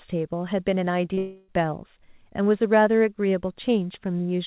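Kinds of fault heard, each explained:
Short concealed packet loss: about 30 ms of the call arrived too late at 1.14 s, and the receiver bridged the gap by extending the preceding sound before blending back. It is heard as a brief smear; a spectrogram shows the preceding sound stretched out for that sliver, with no clean break in the waveform.
Long network dropout: from 1.18 to 1.49 s, roughly 300 ms of speech is missing and has been filled by concealment, likely a dropout on the network. The fill is heard as a sustained buzz or hiss that fades, with no silent gap. The spectrogram shows a repeated, smoothly decaying pattern below 4 kHz, consistent with G.711 band-limiting, and the waveform shows a steadily shrinking envelope instead of a flat line.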